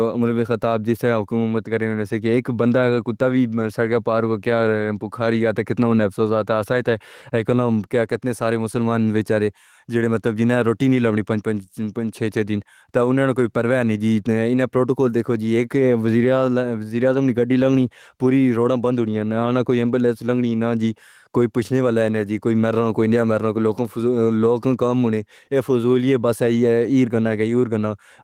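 Right through the speech there's gain pumping: the level ducks by around 5 dB whenever a loud syllable hits. It's likely the input gain was set way too hot, with a fast limiter clamping down and squashing everything.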